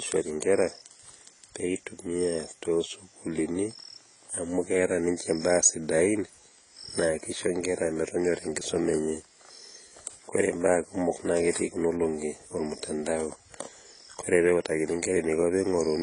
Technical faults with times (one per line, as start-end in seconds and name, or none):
0.00-16.02 AAC compression